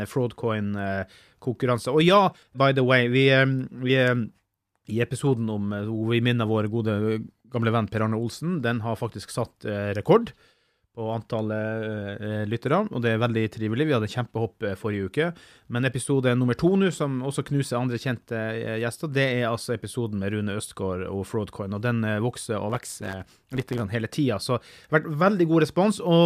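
From 22.69 to 23.82 s, just before "hele tida", there is a block size mismatch (truncated). One stage writes longer blocks than the next reads, which fits a 512-sample write. Each block's tail is dropped. A 100 Hz buzz results, and the speech runs about 1.07 times fast at near-normal pitch.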